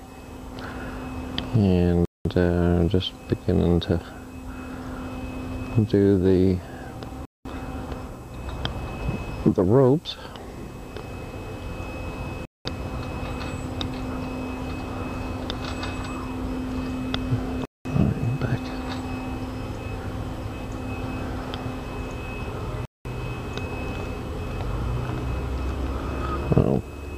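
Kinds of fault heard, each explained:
Gap between chunks: the audio arrives in pieces about 5 seconds long, and a hole of dead silence sits at each join instead of the pieces butting together. Nothing's actually missing; the sound just stops and resumes. You get five of these, each 200 ms with hard edges, at 2.05, 7.25, 12.45, 17.65 and 22.85 s, so they land on a steady beat a little over 5 seconds apart.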